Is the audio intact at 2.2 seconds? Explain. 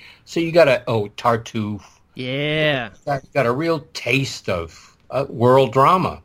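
Yes, the speech at 2.2 seconds is intact, with no audible dropout, glitch or other fault at that moment.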